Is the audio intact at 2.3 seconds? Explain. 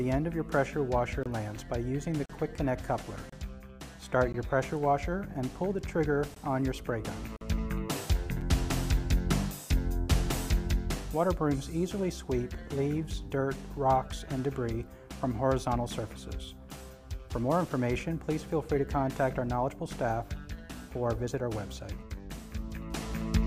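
No, there is a gap between stream segments from 2.26 to 2.30 s. The two segments' timestamps leave about 38 ms unaccounted for, and the player fills it with hard-edged silence. Unlike a dropout, no audio is lost. The sound resumes exactly where it stopped, just delayed.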